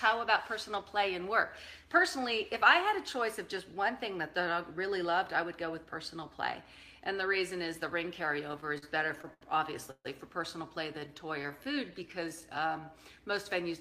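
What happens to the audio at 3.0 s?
Nothing goes wrong at 3.0 s: the audio runs through that moment intact, with no dropout, click, glitch or other fault.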